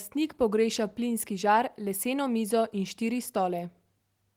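From 2.62 s to the end, the sampling clock wanders by around a microsecond, so each speech sample is taken slightly off time. This sample clock jitter adds a faint hiss, about 40 dB below the speech, that thickens on loud, bright sounds and vanishes in pauses.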